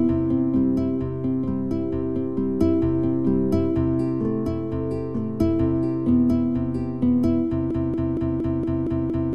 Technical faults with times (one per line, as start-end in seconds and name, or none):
7.71-9.34 broken-record loop